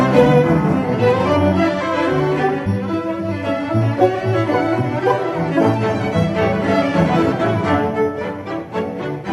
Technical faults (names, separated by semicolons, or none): compressed frames skipped